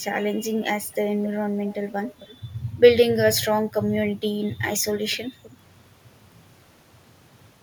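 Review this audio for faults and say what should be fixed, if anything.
Echo leak at 1.23–1.28 s, 1.67–2.37 s, 5.11–5.17 s and 5.43–5.56 s. A faint copy of the speech returns 270 ms late, then 254 ms. The other side likely uses a loudspeaker, and its echo canceller misses some. A headset there would prevent it.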